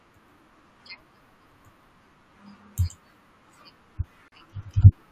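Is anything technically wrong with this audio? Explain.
Yes. At 4.28 to 4.32 s there is a gap at a join of encoded pieces. Separately encoded segments were spliced without removing the encoder's start delay and end padding, so a gap of about 39 ms cuts into the speech with smeared edges before it resumes.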